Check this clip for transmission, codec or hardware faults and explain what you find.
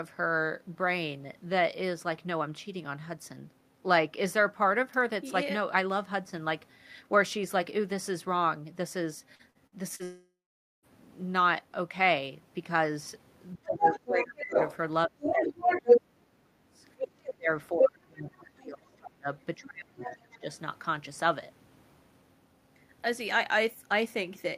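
Four kinds of fault are present: a burst of packet loss running into a network dropout, followed by repeated echo-canceller trouble during overlapping talk.

Repeated packet loss (robotic sound) runs from 9.35 to 10.02 s. Four short gaps, the longest 50 ms, were each bridged by extending the previous sound. About a quarter of the span is patched, which gives the speech a choppy, robotic texture.

The long network dropout follows immediately, from 10.03 to 10.86 s. Its likely cause is a stall in packet delivery that cost roughly 0.8 s of speech. The receiver first stretches the last sound into a fading buzz, then leaves about 0.47 s of silence before the speech resumes with that portion gone.

Speech suppressed in double talk occurs at 13.56 to 14.56 s, 15.07 to 16.83 s, and 17.33 to 20.45 s. The likely cause is an echo canceller that could not separate the local talker from loudspeaker echo and so attenuated both. 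The speech dips by up to roughly 25, 35 and 30 dB.

Other side's voice leaking through appears at 13.85 to 14.76 s, 15.21 to 16.01 s, 17.00 to 17.33 s, and 20.03 to 20.38 s. This is likely residual loudspeaker echo that the canceller left in the microphone signal. A second voice is heard, about level with the talker at first, slightly louder in the second stretch, then progressively quieter.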